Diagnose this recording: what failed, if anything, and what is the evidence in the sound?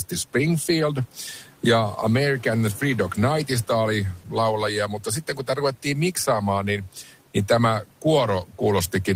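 Speech dips about 11 dB and sounds swallowed at 4.18–4.36, 4.88–6.43, 6.62–7.13 (before "niin tämä") and 8.44–8.6 s. This is speech cut by the noise suppressor, where call processing mistook quiet speech for noise.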